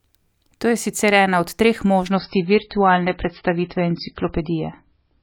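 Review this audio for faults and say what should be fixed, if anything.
From 2.11 s to the end of the clip, the speech drops abruptly to a much lower bitrate, with no gap: an adaptive stream at a lower bitrate, switched down when the connection slowed. The treble vanishes above 5.6 kHz and smeary codec artefacts rise, which fits a fall from around 128 kbit/s MP3 to roughly 16 kbit/s. A spectrogram shows a flat ceiling appearing at 2.11 s, while the waveform stays continuous. Buffering more, or capping how far the player may step down, would prevent it.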